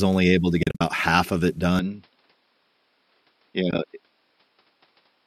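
From 0.63 to 0.81 s there is AAC frame loss with muting. Several short gaps fall within about 180 ms, together about 140 ms of missing speech. The longest single hole lasts around 50 ms. The decoder zeroed the lost frames. The overlapping windows then faded the sound out and back in. Each gap has soft edges.

At 1.79 s the speech turns duller, and it stays that way to the end. The likely cause is an input switched to a poorer device. Nothing above 5.4 kHz remains. The level drops by about 5 dB. A new noise floor sits about 50 dB below the speech. There is no silence at the switch, so the change is abrupt.

From 3.71 to 3.79 s there is a second AAC frame loss with muting. About 40 ms is lost, spread over 80 ms. The longest hole is roughly 20 ms. It sounds like a brief, soft-edged dip in the speech.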